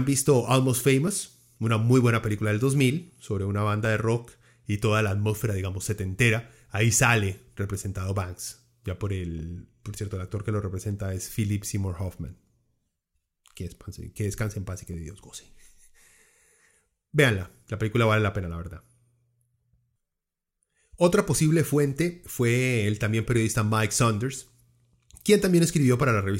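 Two devices in the chain are likely running on separate clocks that disagree by a few hundred parts per million, so the buffer between them drifts until a block of a few dozen samples is dropped or repeated. These clock drift buffer slips recur every 2.77 s, from 1.08 s to 26.03 s, about ten in all. Each slip is a short click or pop in the speech, landing at that steady interval.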